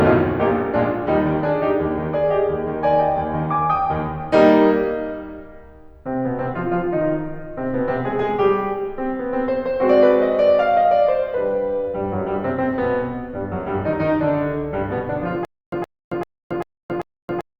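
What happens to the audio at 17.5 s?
At 17.5 s the music falls into a stutter with silent gaps, from 15.45 s to the end: a 118 ms burst repeats every 392 ms with 274 ms of digital silence between. A stalled stream likely replayed its last fragment repeatedly, losing the intended music.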